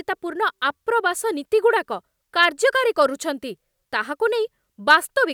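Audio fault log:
No audible faults were found in this speech recording.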